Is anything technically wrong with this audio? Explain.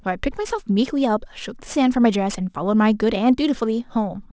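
Yes. Throughout the speech, sibilants sound gritty and metallic, with energy packed hard against 8 kHz. This is aliasing: downsampling without filtering, likely to a 16 kHz rate, folded high frequencies back, roughly 25 dB below the speech.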